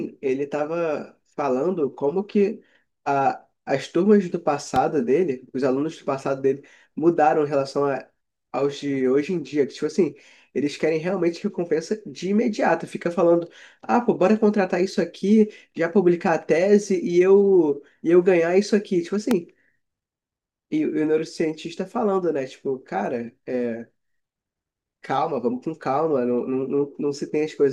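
A sharp, single loud pop cuts through the speech at 4.76 to 4.78 s, peaking around 10 dB above the surrounding level, and a second, harder one at 19.31 to 19.33 s reaches about 15 dB above it. Each is a brief thump lasting a couple of hundredths of a second, with the speech running on underneath. The likely cause is a sudden voltage step or spike, such as a plug, switch or static discharge, entering the signal chain and being shaped into a pulse.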